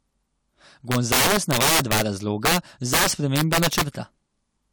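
Violent cracks on the loud speech from 0.92 to 2.02 s, 2.45 to 2.57 s and 2.93 to 3.81 s are integer overflow: peaks driven about 14, 6 and 11 dB past the limit wrapped to the opposite sign instead of being held.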